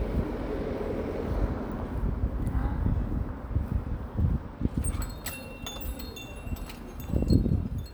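No technical faults can be heard anywhere in this recording of sounds. Nothing in the audio points to a problem in how it was captured, processed or delivered.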